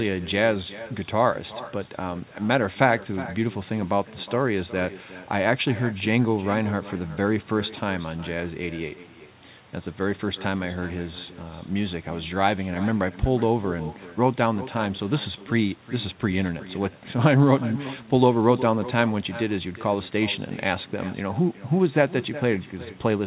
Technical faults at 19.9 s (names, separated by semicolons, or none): echo with no canceller